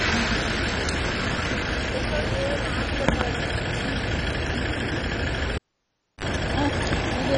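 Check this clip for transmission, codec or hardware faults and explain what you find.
Two faults here: a codec problem running through the whole clip, and a cable dropout near the end.

The first is MP2 compression. All the way through, the sound is dull, with nothing above 10 kHz, and it has a gurgling, grainy texture. The likely cause is MPEG Layer II encoding at a very low bitrate, which fits something around 32 kbps. At that rate the encoder can't fund all 32 sub-bands, so the upper ones get dropped and the rest are quantised coarsely. That's where the flickery, granular distortion comes from.

The second is a cable pulled and plugged in, from 5.55 to 6.25 s. You get a pop, then about 650 ms of near silence. Then there's a short 45 ms burst of 50 Hz mains buzz, which is the plug tip touching before it's fully seated. A second pop follows as the sound comes back. The pops are the sudden DC step when the live connection breaks and then remakes.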